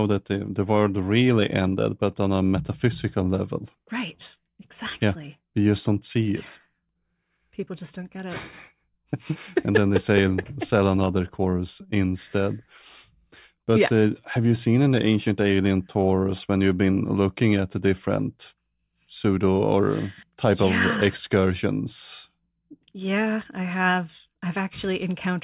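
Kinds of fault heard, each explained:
No technical fault can be heard anywhere in this speech recording.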